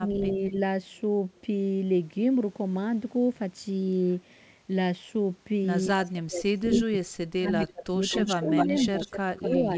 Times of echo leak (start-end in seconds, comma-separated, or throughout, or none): 0.29-0.33, 6.70-6.80, 7.48-7.67, 8.09-9.56